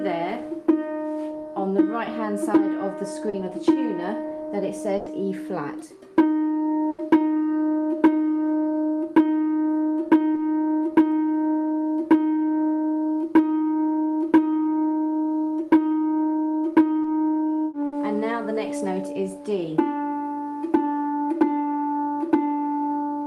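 Three brief smears in the audio, at 3.29 to 3.35 s, 10.34 to 10.38 s and 17.02 to 17.06 s, are short concealed packet loss: 40, 20 and 20 ms never arrived in time, and the receiver bridged each hole by extending the preceding sound before blending back. Longer held, fading stretches at 4.97 to 5.08 s, 6.90 to 7.00 s and 17.86 to 17.94 s are bursts of packet loss. There the receiver stretched the last sound across 90, 80 and 60 ms while turning it down, and the audio resumes with roughly 80, 80 and 60 ms of material gone.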